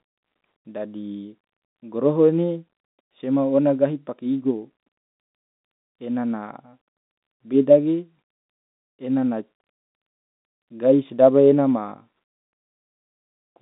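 Nothing in this speech recording stood out as a technical problem on listening.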